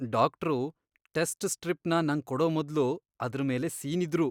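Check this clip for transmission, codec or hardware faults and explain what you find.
No transmission, codec or hardware faults are audible here.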